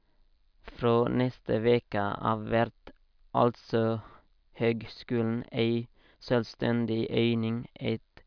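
Speech recording with no technical faults to report.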